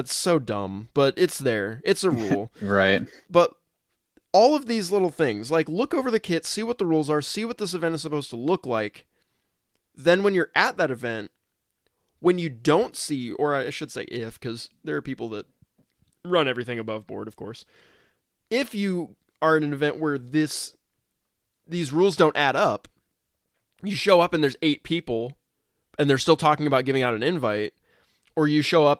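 No technical faults can be heard in this speech.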